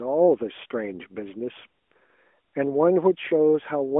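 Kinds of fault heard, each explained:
No faults heard; the speech sits in the narrow telephone band expected of an AMR-NB mobile link, which is the normal path here.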